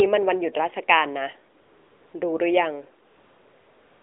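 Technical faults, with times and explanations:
1.62–2.14 s and 3.08 s to the end, AMR comfort noise: In both pauses the phone's voice activity detection judged the talker silent and stopped sending speech frames. The receiver filled the 0.52 s and 0.96 s gaps with synthetic noise built from a coarse estimate of level and spectrum. The real background gives way to a smooth, steady hiss that switches in and out at the gap edges. It sits inside the narrowband mobile line, which holds roughly 300 Hz to 3.6 kHz.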